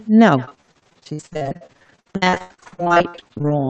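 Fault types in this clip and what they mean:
Echo with no canceller: The far end's loudspeaker feeds the call back into its microphone and nothing removes it, so every phrase returns around 150 ms later as a faint, thin copy about 23 dB below the speech, trailing it throughout.
Repeated packet loss (robotic sound): From 0.45 s to 3.52 s packets keep going missing, and each hole is bridged by stretching the last sound. Dozens of short dropouts, the longest 81 ms, leave roughly half that stretch patched, giving choppy, robotic speech.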